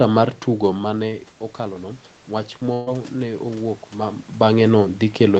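Speech over a band-limited call path with nothing above 8 kHz, showing two faults. From 0.46 s to about 4.29 s there is automatic gain rising. The voice drops by about 11 dB as the talker moves away, and the gain control slowly climbs by about 6 dB to compensate, so voice and room noise swell together. At 2.73 to 2.89 s a burst of packet loss leaves a gap of about 132 ms. The receiver conceals it by extending the last sound and fading it, heard as a brief held buzz or hiss. Playback then resumes further on, with about 140 ms of audio missing.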